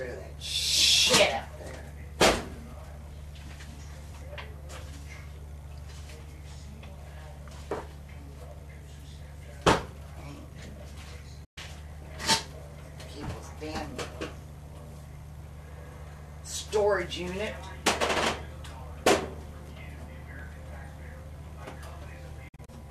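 Two digital broadcast dropouts here, where the receiver muted on bad frames: a quick fade to silence at 11.44–11.58 s, then scattered short holes around 22.48–22.71 s.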